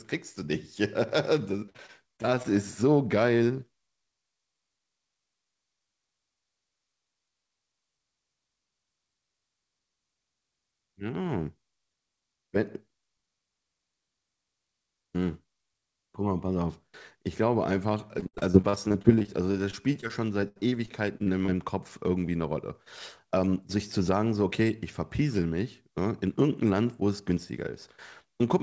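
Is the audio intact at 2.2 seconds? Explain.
No. 2.2 s falls inside repeated packet loss (robotic sound) from 1.66 to 2.47 s: seven short dropouts, longest about 51 ms, each patched by stretching the preceding sound. It sounds choppy, with pieces missing, and a spectrogram shows repeated smeared, frozen slices with abrupt edges.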